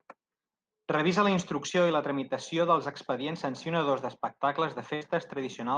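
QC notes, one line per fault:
4.95 to 5.03 s, burst of packet loss: a short run of consecutive packets failed to arrive in time for playback, near the end of the speech. The receiver bridged the hole with about 56 ms of concealment, extending the last sound it had and fading it down, so the speech briefly turns into a held buzz or thinning hiss. Playback then picks up roughly 60 ms later in the utterance, so a short slice of speech is simply absent.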